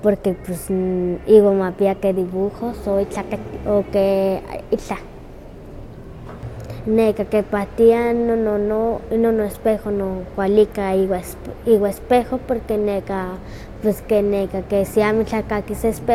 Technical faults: none

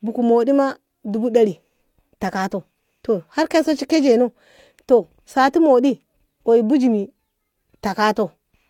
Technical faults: none

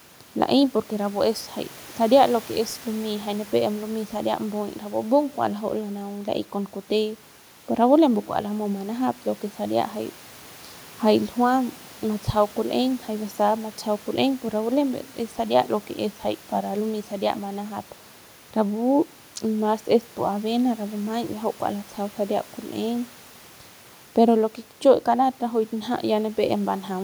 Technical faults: none

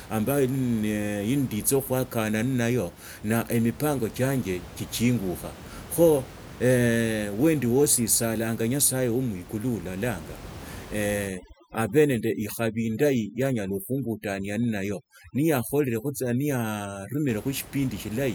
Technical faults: overdone noise removal

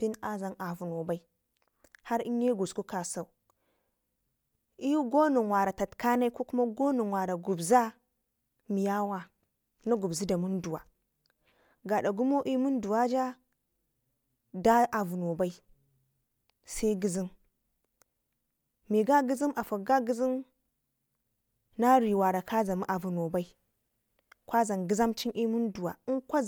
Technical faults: none

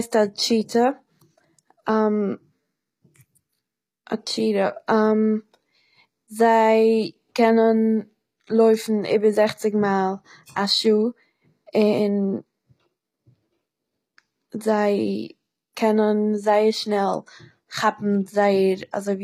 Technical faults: HE-AAC compression

